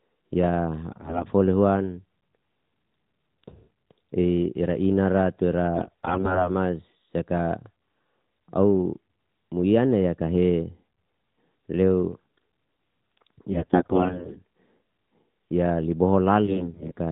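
AMR bit errors strike from 0.92 to 1.24 s, 5.76 to 6.50 s, 13.52 to 14.38 s and 16.46 to 16.94 s, heaviest in the second and third bursts. Corrupted bits in the received frames misplace the excitation pulses and skew pitch, gain and spectral values. The speech turns hoarse, scratchy and gargly while keeping roughly its pitch and loudness. That retained pitch and level separates it from the dropouts or muting of lost frames. The damage sits on the band-limited, lightly coded narrowband mobile sound, which points to AMR-NB at about 12.2 kbps.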